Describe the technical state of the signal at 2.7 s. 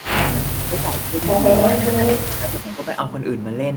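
At 2.7 s the speech sinks. From 2.36 to 2.9 s the level dips by around 10 dB at its deepest, with a little under half a second affected in all. This is speech suppressed in double talk, likely because both ends were talking together and the echo canceller, unable to tell the local talker from loudspeaker echo, turned everything down while the far side spoke.

Overlapping that stretch, from 2.56 to 3.01 s, a faint delayed copy of the speech trails behind, arriving 347 ms late and sitting roughly 25 dB below the direct sound. This is echo leak: one side's microphone picked up its own loudspeaker, and its echo canceller likely failed to strip all of it before sending it back.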